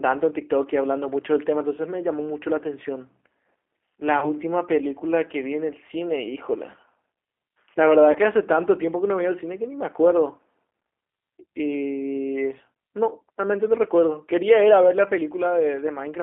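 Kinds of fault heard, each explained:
G.729 codec: The whole clip is carried by a narrowband speech codec at 8 kbit/s that models the voice with a vocal tract filter, a pitch predictor and a few coded pulses per frame. The line band runs from about 300 Hz to 3.4 kHz, so the speech sounds thin and boxed in. The coding damage is plainly audible. Voiced sounds come out slightly rough and synthetic rather than natural.
VoIP packet loss concealed by the speech codec: Twice a short stretch of audio goes missing and the decoder fills the gap itself. It repeats its last pitch and filter settings while turning the level down. Each gap is about 30 ms, which fits a single lost packet. The first starts at 4.19 s and the sound stays smeared until about 4.34 s. The second, at 8.12 s, settles by about 8.18 s.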